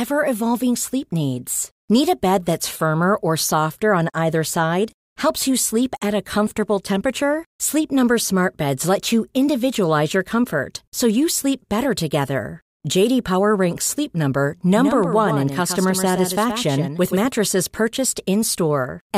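From 14.76 to 17.26 s the speech gains a doubled audio track: a quieter, full-band copy trailing about a tenth of a second behind, likely from a second, slower capture path.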